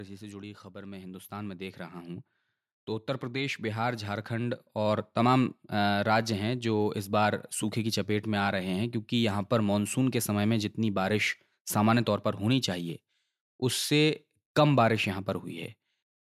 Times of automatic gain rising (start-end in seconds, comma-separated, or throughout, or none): 0.44-5.15